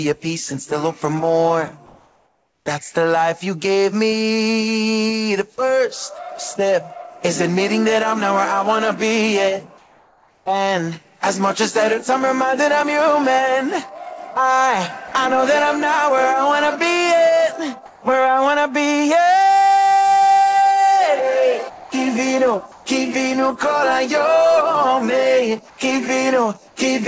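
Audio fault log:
1.86–2.66, 9.78–10.46, 17.86–18.02, 22.72–22.86, 25.70–25.78 and 26.68–26.76 s: comfort noise in place of the background. In these gaps the real background, sitting about 29 to 46 dB below the loudest sound, turns into a flat, featureless hiss. The first patch keeps the same level. The others drop by about 2 to 4 dB. The likely cause is discontinuous transmission: the sender went quiet and the receiver filled the gap with synthetic noise.
15.08–15.12 and 21.70–21.92 s: sound dropped by the voice detector. The sound itself gives way to steady noise. The first cut takes away 40 ms. The second fills 0.22 s with noise, and about 0.12 s of real sound is missing within it. The sender's detector likely mistook soft sound for background and stopped sending until it triggered again. The noise it left behind is band-limited like the call audio, with nothing above 8 kHz.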